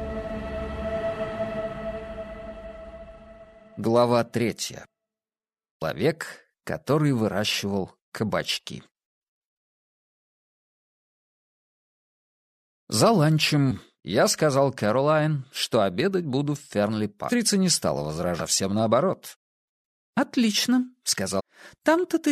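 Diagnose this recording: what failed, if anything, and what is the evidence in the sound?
Damaged data in the compressed stream at the codec stage: corrupted frames make the decoder lose sync, giving brief blips at 5.81 s, 13.70–13.72 s, 17.28–17.30 s, 18.39–18.41 s and 21.39–21.41 s.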